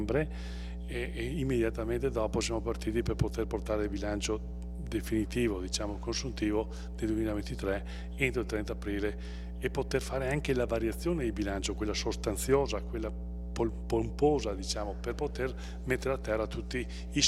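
From start to finish, a steady 60 Hz mains hum sits under the audio at nearly the level of the sound itself. It comes from power-line current leaking in through a ground loop or nearby transformer. Unlike wind or handling rumble, its pitch and loudness never waver.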